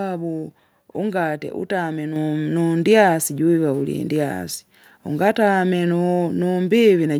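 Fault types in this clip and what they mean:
microphone volume stepped up: At 2.17 s the speech and the background noise both jump louder together, by about 5 dB, in a single step. The call software judged the microphone too quiet and raised the device's input volume all at once.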